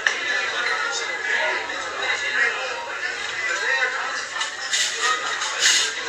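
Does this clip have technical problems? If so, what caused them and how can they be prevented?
Yes. Across the whole clip the top end stops dead at about 14.2 kHz, and what's left of the treble comes across hissy and grainy, with tones roughened and attacks smeared. That's most likely Vorbis compression at a low setting, in the region of 34 kbps. At that rate the encoder trims the band and quantises the high residue so coarsely that real detail turns into noise of similar energy. Encode at a higher quality level, or keep a lossless master.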